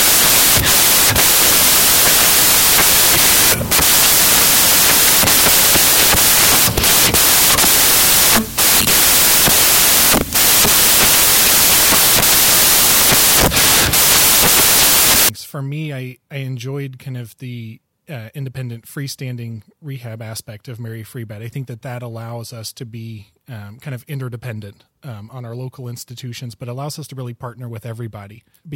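A reader assembling each sample from the wrong bytes, whether shifted by one byte, swapped in order, or read at the wrong alignment, corrupts the first 15.29 s of this speech recording. Because the rapidly fluctuating low-order bits end up as the most significant part of every value, the decoded signal turns into loud, harsh broadband noise from 0 s to 15.29 s, close to white on the louder sounds.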